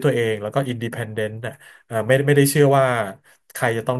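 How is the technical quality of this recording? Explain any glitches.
Nothing in this recording sounds like a glitch, so there's really nothing to explain: the speech comes through without any audible technical problems.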